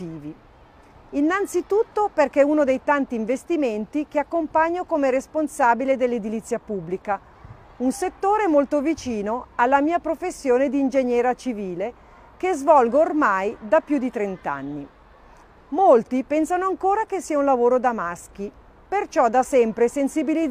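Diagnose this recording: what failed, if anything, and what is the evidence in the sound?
Nothing in the recording stood out as a failure on listening.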